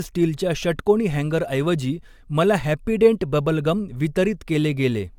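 Throughout the speech, the sound is swirly, smeared and hollow, with blurred attacks and nothing above 17 kHz. This points to generation loss, likely from AAC-LC encoding at around 96 kbit/s repeated about three times. Each pass re-quantised on a shifted frame grid, compounding noise and spectral holes.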